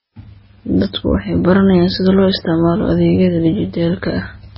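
From start to finish the speech sits under heavy codec damage, most likely MP3 compression at a very low rate, which fits something around 16 kbps. Nothing survives above 5.6 kHz, so the treble is sliced off flat and the sound comes across dull. With so few bits, the encoder drops quiet frequency components that flicker in and out between frames, giving that watery, swirly texture, metallic chirps on s sounds, and smeared attacks.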